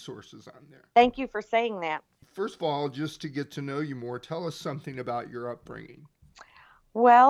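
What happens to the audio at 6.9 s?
Nothing goes wrong at 6.9 s; the speech carries on intact through that moment.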